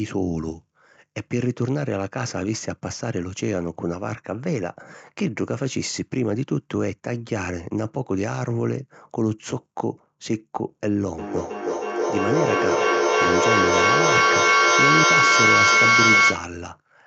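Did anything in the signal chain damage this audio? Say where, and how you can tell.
Yes: feedback howl from 11.18 to 16.59 s, a tone around 2 kHz rising to about 7 dB above the speech, pulsing roughly every 300 ms as two devices recirculate sound acoustically.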